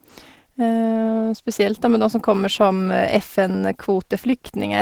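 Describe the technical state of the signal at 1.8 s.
At 1.8 s you're hearing Opus voice compression, and it runs through the whole clip, not just this moment. The speech has that hybrid sound: a linear-prediction coder handles everything below 8 kHz and a transform layer fills the band above, up to about 20.3 kHz. The excitation is coded coarsely, so the voice comes out plainly hoarse and a bit robotic, which fits a bitrate around 16 kbps.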